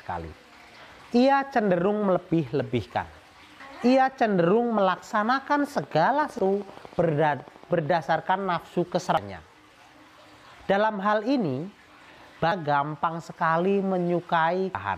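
A short glitch at 3.60 s marks damaged data in a compressed stream: corrupted bytes make the decoder misread a frame, lose sync and skip to the next frame header. The same glitch recurs at 6.39, 9.17, 12.52 and 14.75 s. From 5.60 to 7.87 s, a train of clicks of similar shape ticks steadily at 12.8 per second, about forty clicks reaching roughly the level of the sound itself, likely from electrical interference or a faulty connection injecting repeated pulses.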